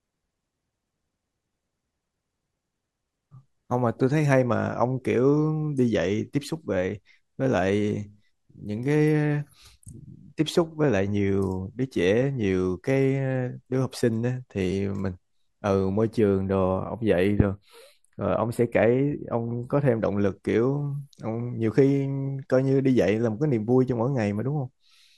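Speech with channel delay (comb filtering) from 16.19 to 19.96 s: one channel lags by a few samples, under a millisecond, and the mono sum cancels near 7 kHz, giving a hollow, phasey sound. A spectrogram shows a fixed dark horizontal notch band there.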